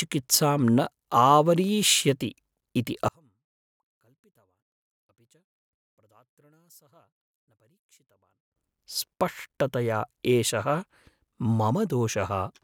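A speech recording where, from 3.08 s to 8.56 s, the speech sinks by about 36 dB to a faint remnant before returning at full level. The likely cause is one channel inverted: with one stereo side's polarity reversed, the content shared by both channels cancels when they are summed to mono. What separates this from a plain dropout or mute is that the sound doesn't go fully silent. A weak trace of the difference between the channels survives throughout the span.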